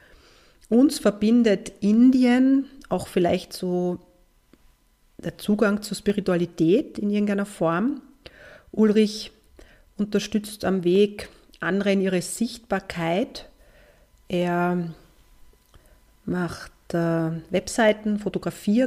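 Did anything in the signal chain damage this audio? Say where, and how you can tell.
Yes. The damage sits at the buffer between two devices. From 0.55 s to 18.58 s there is a regular tick in the sound, repeating every 0.69 s, about thirty times in all. That steady spacing points to clock drift buffer slips. The likely cause is two devices running on separate clocks that disagree by a couple of hundred parts per million. The buffer slowly drifts until a handful of samples is dropped or repeated, and each slip is heard as a click.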